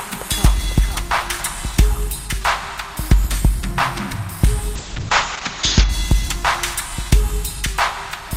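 Everyday sound that turns rough and muffled from 4.78 to 5.95 s, with content above 8 kHz gone, then clears. This is a call bitrate drop: the encoder was starved of bits, which fits a fall from around 48 to 7 kbps.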